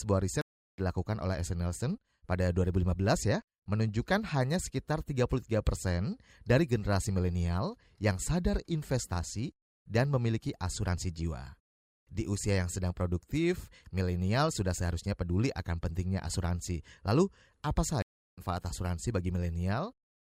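Stream reconnect at 0.41 to 0.80 s and again at 18.02 to 18.42 s in this speech clip: each time the connection dropped, the player fell silent for about 0.37 s and 0.35 s, then reconnected and started a new decoder partway through the stream. The speech fades back in at a later point, skipping roughly a fifth of a second the first time and roughly 0.4 s the second.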